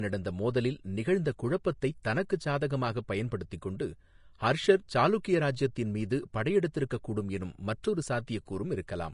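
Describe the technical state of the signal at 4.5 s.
At 4.5 s the speech sounds hissy and grainy, with consonant onsets smeared and a dull top end where nothing reaches above about 10.6 kHz. This damage runs through the whole clip, not just this moment. The likely cause is Vorbis compression at a low setting, consistent with roughly 35 kbps: the encoder lowered its cut-off and quantised the upper residue so coarsely that fine detail turned into noise of similar energy.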